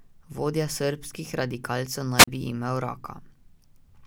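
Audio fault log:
2.16–2.28 s, wireless microphone squelch dropout: after "srbskih radikalcev" the radio link from an analogue FM microphone weakens, so hiss swells briefly before the receiver's squelch mutes the output for about 38 ms, leaving a near-silent hole until the speech returns at "bi imel".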